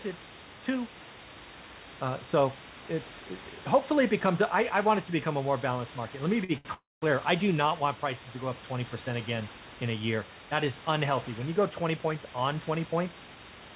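Speech recorded with room noise about 15 dB below the voice, carried over a call path whose spectrum stops at 4 kHz, which points to G.711 mu-law at 64 kbps. Two short stalls from late packets occur at 6.44–6.52 s and 6.58–6.68 s. The jitter buffer ran dry and the last sound was stretched by 48 ms and then 70 ms, so nothing is lost but a sound is held too long. On a spectrogram the harmonics run flat and smeared for those stretches. Then a call audio freeze runs from 6.74 to 7.05 s, just before "I do not want". It is likely caused by packets held up in transit. A buzzy continuation fades into about 190 ms of silence, adding 279 ms of gap. It shows as a decaying smear followed by a blank vertical band, with the waveform flat. From 11.62 s to the end a jitter buffer speed-up trims pitch-period slices, roughly a fifth of a second in all. The speech runs at 111% speed with unchanged pitch and sounds hurried. 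Harmonic spacing stays the same while syllables sit closer together in time.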